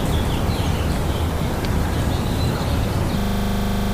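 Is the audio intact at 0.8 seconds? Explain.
Yes, the audio at 0.8 seconds is intact, with no dropout, click, distortion or other fault at that moment.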